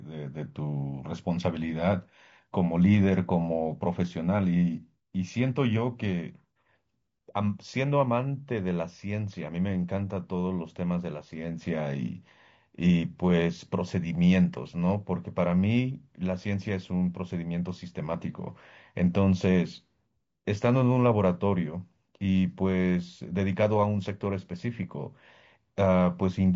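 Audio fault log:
Throughout: low-delay AAC compression. The speech sounds rough and grainy for the whole clip, with a noisy haze filling the gaps between pitch harmonics and a thin, somewhat synthetic top band. The cause is likely a low-delay AAC codec of the AAC-ELD kind used for video calls. Its short frames of about 10 ms separate harmonics poorly and use up bits fast. The damage is plainly audible, which fits a bitrate near 32 kbps.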